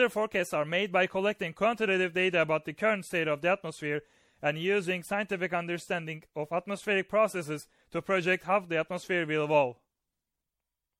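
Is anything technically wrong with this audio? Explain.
Yes. Throughout, the speech shows generation loss: it was likely re-encoded through MP3 about seven times, consistent with 64 kbit/s. Each pass re-quantises on a shifted frame grid, compounding noise and spectral holes, so it sounds swirly, hollow and smeared, with blurred attacks and nothing above 16.5 kHz.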